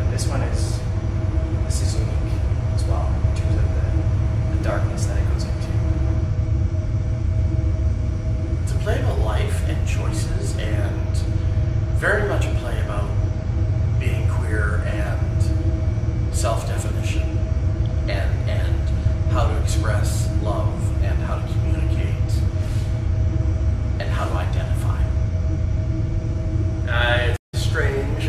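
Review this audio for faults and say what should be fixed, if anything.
A stream reconnect occurs near the end, from 27.37 s to 27.54 s. The connection drops and the sound cuts to silence for 110 ms. The player then reconnects and starts a fresh decoder partway through the stream. Playback does not pick up where it stopped. It resumes a few tens of milliseconds further on, so a small piece of the audio is skipped. To prevent this, give the player a larger network buffer and let it resume by byte offset.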